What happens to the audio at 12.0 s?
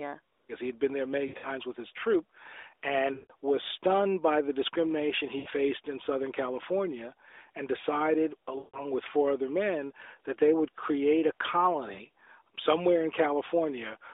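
Right around there, from 11.94 to 12.00 s, you get lost AMR speech frames. It's a 40 ms hole, which fits two missing 20 ms frames. The decoder rejected them on the checksum and papered over the gap by reusing the last good pitch and vocal tract settings at falling gain, so you hear a quick warbly dip where the sound smears and sags, then comes back a touch weak and rough through the narrowband phone line.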